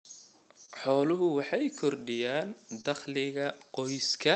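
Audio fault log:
Throughout: clock drift between sender and receiver. The sending side's clock runs slow, by roughly 2 percent, so audio arrives a little behind the rate the receiver plays it out. The jitter buffer keeps draining, and the receiver covers the shortfall by repeating short slices of sound. This causes small, uneven timing hiccups across the whole clip, faint stutters and slight drags in the speech rhythm, never falling at regular intervals.
0.65–0.70 s and 2.81–2.86 s: short stall from a late packet. At each point a packet was not there when due and the jitter buffer ran dry. The receiver held the last sound for about 25 ms the first time and about 27 ms the second, then resumed exactly where it left off, so nothing is lost. What you hear is a sound stretched slightly too long with a faint buzzy or dipping quality, against the call codec's coding noise and its cutoff at about 8 kHz.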